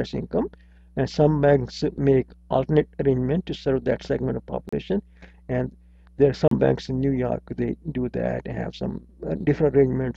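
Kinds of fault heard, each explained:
Block of digital silence: near 4.69 s and 6.48 s the audio drops to silence for about 35 ms with no fade, leaving a short hole; the waveform shows a flat line, the spectrogram a blank strip.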